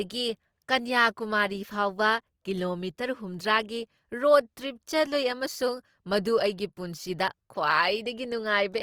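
Right through the speech you get Opus compression artefacts, grainy, rough and noisy where detail should be, likely from music-mode Opus at something like 24 kbps, though the top end still reaches about 20.2 kHz.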